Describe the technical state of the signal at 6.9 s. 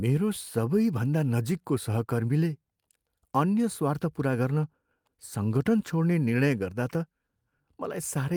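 No fault is audible at 6.9 s; the signal is intact at that moment.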